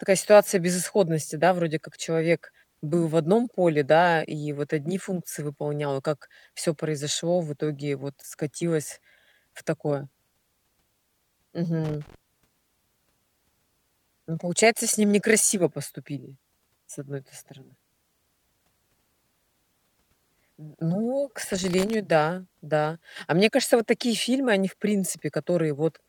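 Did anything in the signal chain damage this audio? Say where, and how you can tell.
Yes, in the analogue wiring. There's loose connector crackle from 11.84 to 12.15 s and again from 21.44 to 21.94 s, just before "да да": irregular scratchy bursts where a worn contact keeps making and breaking, chopping the signal and popping on any DC.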